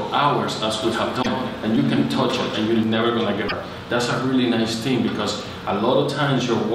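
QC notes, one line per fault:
0.83–2.83 s, doubled audio track: the signal was most likely captured twice, with a second, slower path mixed back in. A full-band copy trails about a fifth of a second behind at roughly 5 dB down, dry and uncoloured, cutting in and out abruptly.
1.21–1.27 s and 3.47–3.52 s, broken MP3 bit reservoir: frames were likely dropped, so the following frames fetched borrowed data from the wrong bytes. Each time the audio jumps ahead and about 50 ms of it, roughly two 24 ms frames, comes out garbled.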